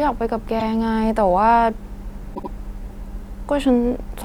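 Repeated frames: the decoder was fed the same compressed audio more than once. At 0.59 s a 26.1 ms block replays once, consistent with a single frame, giving a brief stutter. At 2.34 s a 78.4 ms block, consistent with three frames, plays twice more, a longer stammer that adds 156.7 ms.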